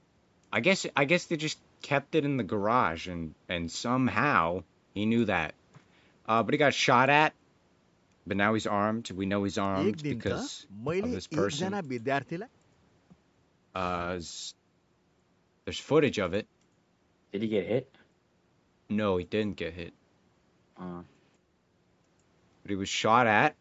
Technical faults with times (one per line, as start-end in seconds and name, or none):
none